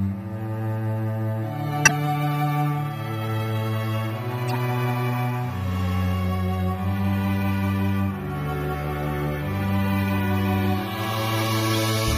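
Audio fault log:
throughout: MP3 compression. The whole clip has a steady, low-bitrate coded sound. The detail has a watery, swirling quality as weaker frequency components drop in and out from frame to frame. Sharp attacks smear. The likely cause is an MP3 encode at something like 64 kbps, where the encoder runs short of bits and discards what it judges least audible. This damage is constant across the clip, not a short event.
1.85–1.91 s, 4.48–4.56 s, 11.71–11.75 s: corrupt frame decoded. Three short chirps or noise blips break through, lasting about 60 ms, 90 ms and 40 ms. Each span covers roughly two to four damaged compressed frames that the decoder played anyway, putting energy at the wrong frequencies. The first blip is loud, peaking around −5 dBFS, and the later two are around −15 dBFS. Unlike the compression smear, these are isolated, abrupt sounds that have nothing to do with the surrounding audio.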